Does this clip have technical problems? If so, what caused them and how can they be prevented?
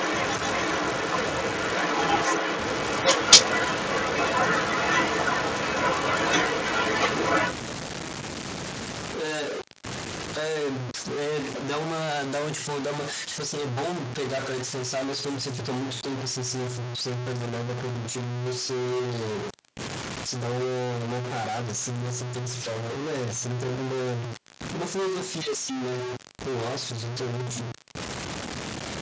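Yes. A stuck bit is the likely cause of the distortion that runs through all of the speech: one data bit in the converter or a data line seems to hold a fixed value, so about half the samples are off by that bit's weight. The result is distortion on the speech, and the pauses fill with noise instead of falling silent. Checking the converter, its wiring and bit-level test signals would catch this fault.

An echo leak affects the stretch from 0 to 7.53 s. The far side was likely on a loudspeaker, and its echo canceller failed to remove what its microphone picked up. A delayed copy of the speech follows about 400 ms behind, roughly 5 dB louder than the original. Using a headset on that end, or a properly converged echo canceller, would stop this.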